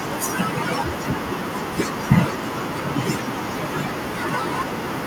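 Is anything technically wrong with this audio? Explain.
Yes. Speech is cut by the noise suppressor throughout, from 0.0 to 5.06 s. The suppressor misjudges parts of the speech as background noise and lowers them along with it, pulling some moments down by about 13 dB. Soft consonants, word endings and quieter stretches come out swallowed or faint. The room noise, sitting about 24 dB below the speech, is part of the recording.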